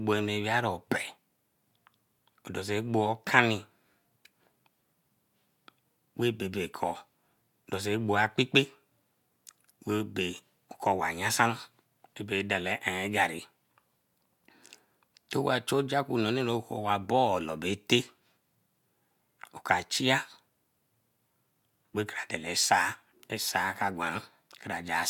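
Nothing goes wrong anywhere in this bit of speech, so there's no technical fault to point to at any moment.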